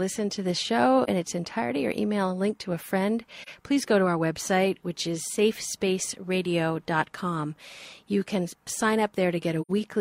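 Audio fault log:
1.04–1.09 s, 3.42–3.48 s, 9.61–9.71 s: AAC frame loss with muting. Zeroed frames leave soft-faded holes of 43 ms, 43 ms and 85 ms.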